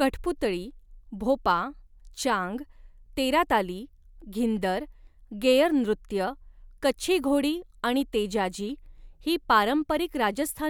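Speech recording, no technical faults detected on listening.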